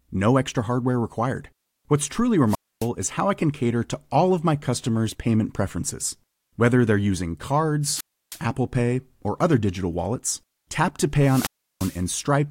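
At 2.47 s, a wireless microphone squelch dropout cuts in just before "is how I can". It lasts to 2.88 s, with about 270 ms of muting. Two more follow. One comes after "they're using", from 7.89 to 8.40 s, muting for about 320 ms. The last comes after "digital wallets tap to", from 11.17 to 12.05 s, muting for about 340 ms. Each time the radio signal fades. Hiss rises briefly, then the receiver's squelch shuts the output to near silence before the voice returns.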